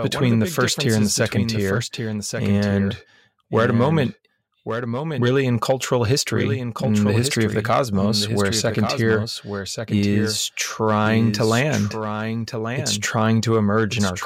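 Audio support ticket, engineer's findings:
Doubled audio track, whole clip. Speech heard twice: second full-band copy trails by about a second, roughly 5 dB quieter, no decay or room colouring, and it never drops out. Likely cause is a second capture of the same source via a slower path, or an edit leaving two copies misaligned. Check routing and monitoring loops for a duplicate feed into the mix.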